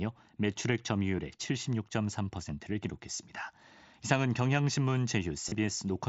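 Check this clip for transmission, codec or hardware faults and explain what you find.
There is one fault: concealed Bluetooth headset packet loss, heard twice over an mSBC wideband headset link whose light graininess on loud sounds belongs to the codec itself. At 1.17 s a single loss of about 7.5 ms is almost inaudible. Between 5.49 and 5.55 s the losses cluster over 60 ms, with the longest run lasting 30 ms. The receiver patches each gap by repeating the best-matching stretch of the last 20 milliseconds or so of waveform, so the clustered loss comes out as a brief buzzy, steady tone at full level, ending in a small warble as real audio resumes. That filled-in buzz sets it apart from a plain dropout, which would leave a gap of silence or a click.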